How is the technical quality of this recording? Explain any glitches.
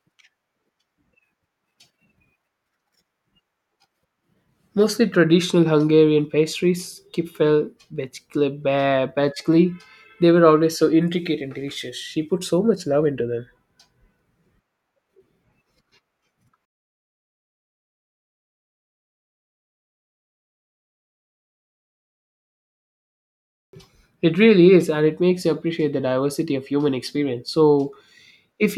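No glitches or technical faults can be heard anywhere in the speech recording.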